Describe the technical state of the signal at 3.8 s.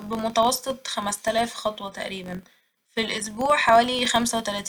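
At 3.8 s the speech carries the filter-restarted-on-every-block fault present throughout the clip. Each block starts from a cleared filter state, so a tick at about 46.9 Hz, which fits a 1024-sample buffer, forms a level-following buzz. It appears as evenly spaced vertical lines on a spectrogram and as small regular steps in the waveform.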